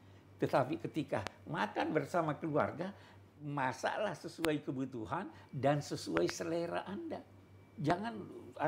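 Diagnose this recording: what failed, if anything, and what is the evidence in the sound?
Five loud pops sit on top of the sound, which carries on underneath each one: a single sharp pop at 1.27 to 1.29 s, another at 4.45 to 4.47 s, a quick double pop from 6.17 to 6.32 s, and a last one at 7.90 to 7.92 s. They spike about 20 to 25 dB above the signal. The stage is likely analogue wiring, a loose plug, a switch or static dumping voltage steps into the line, which the downstream circuitry shapes into those brief thumps.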